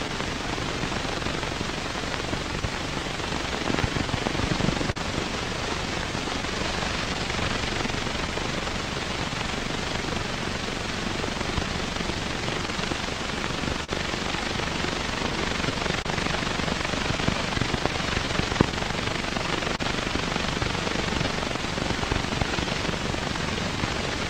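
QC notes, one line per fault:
Throughout: clock drift between sender and receiver. The sending clock runs roughly 3 percent slow against the receiver's, so the jitter buffer keeps draining and the receiver must stretch the audio to keep playing. Small timing hiccups recur across the clip at uneven intervals.
0.07–9.01 s: scattered short gaps. About fifteen lost or late packets, spread one at a time, were each patched by extending the preceding sound, roughly 150 ms filled in total. The longest lasts around 40 ms, heard as brief ticks or smears within clear audio.
0.47–24.22 s: repeated timing corrections. To keep pace with the slower sender, the receiver repeatedly repeats short pieces, always lengthening, never cutting. It plays at about 99 percent speed and adds roughly 300 ms overall, heard as occasional hiccups or a mildly unsteady tempo.
11.66–21.29 s: scattered short gaps. Another run of about fifteen isolated lost or late packets, each concealed by continuing the last sound, roughly 200 ms patched altogether. 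None exceeds around 40 ms, so they come through as brief ticks or smears between clear stretches.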